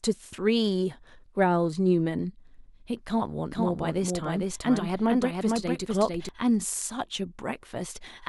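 From 3.51 s to 6.29 s there's a doubled audio track: a second full-band copy of the speech trails the original by about half a second, sitting a few dB below it. It's dry, with no decay or room colour, so it reads as a clean stutter rather than an echo. It cuts in and drops out abruptly at those points, which likely means a slower second capture path got mixed in.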